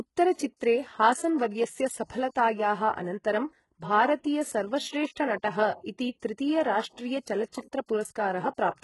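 Across the whole speech clip the treble has a synthetic, gritty edge, with nothing at all above 11.4 kHz. This is HE-AAC compression, likely at a very low bitrate around 12 kbps, with heavy damage. The codec kept only the lower spectrum and rebuilt the highs by copying lower bands upward, so the top end stays bright but its harmonics don't line up with those below. Sibilants therefore sound lispy and metallic. A plain low-pass filter would instead sound dull and clean.

Three times, a brief hiss smears in just ahead of a sharp onset: 0.57 to 0.60 s (33 ms), 2.30 to 2.36 s (58 ms) and 7.48 to 7.53 s (46 ms). This is pre-echo. The attack fell late in a transform block, so quantisation noise sized for the loud part spread back into the quiet moment before it. Because the noise comes before the onset and softens it, it is distinct from a click, which is a single sharp tick, and from reverb, which trails after the sound.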